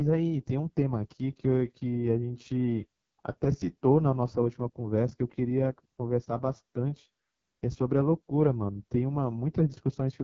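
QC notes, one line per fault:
Throughout: AMR wideband (HD Voice) codec damage is heavy, with rough, raspy speech that points to the lowest 6.6 kbit/s mode and no content above 7.5 kHz.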